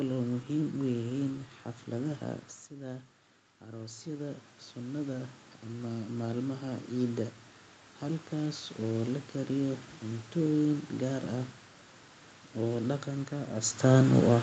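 Automatic gain rising affects this speech clip from 3.65 to 7.4 s, ending just before "halkaas oo la kariyo". After the talker moves back from the microphone around 2.5 s, the input falls by about 11 dB, and the gain control slowly adds about 9 dB, so voice and room noise swell together.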